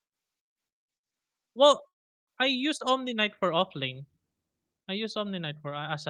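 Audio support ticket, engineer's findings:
Call audio freeze, 1.87 to 2.30 s. Packets likely held up in transit, draining the jitter buffer. Last sound briefly extended, then roughly 380 ms near-silence. Speech resumes where it stopped, nothing lost, everything after shifted 400 ms late.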